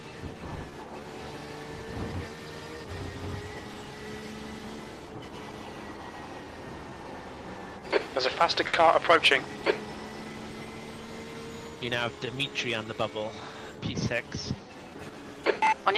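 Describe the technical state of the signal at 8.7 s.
At 8.7 s a sound is held too long, with a slight dip or buzz, from 8.67 to 8.75 s. This is a short stall from a late packet: the jitter buffer ran empty, so the receiver stretched the last sound by about 60 ms, then resumed where it left off, losing nothing. Around it, repeated timing corrections run from 0.02 to 15.84 s at 96% speed, adding roughly 0.7 s overall. Clock drift between sender and receiver is the cause: the sender runs about 4 percent slow, so the buffer keeps draining.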